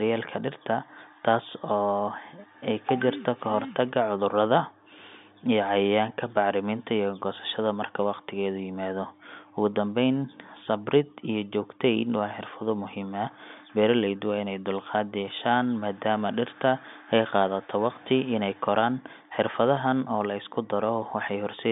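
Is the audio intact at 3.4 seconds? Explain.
Yes, at 3.4 seconds the audio is intact, with only the band limit of G.711 telephone coding, which passes nothing above about 3.7 kHz, and no fault at that moment.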